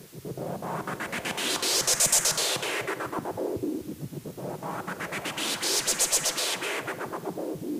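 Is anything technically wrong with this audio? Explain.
Yes. Low bit depth with dither runs through the whole clip. The audio is stored with only 7 bits, and dither noise is added before rounding. This turns the rounding error into steady white noise. It sounds like a constant, even hiss, roughly 20 dB below the sound, with no distortion.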